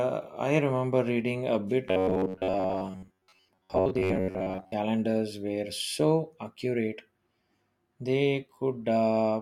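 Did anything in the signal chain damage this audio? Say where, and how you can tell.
Yes. Right after "remember reading a bit", from about 1.88 to 4.73 s, the speech collapses into a stiff, metallic buzz pitched around 93.8 Hz. This is robotic sound from repeated short buffers, most likely at the driver or buffer stage. New audio kept arriving late, so the same snippet of roughly 10.7 ms (which fits a buffer of about 10 ms) was replayed over and over while most of the real audio was dropped.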